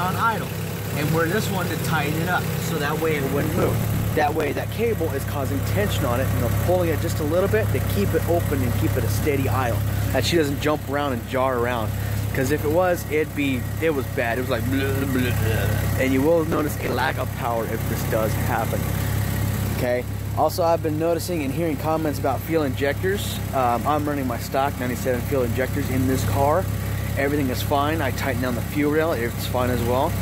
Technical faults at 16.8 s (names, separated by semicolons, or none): processor overload crackle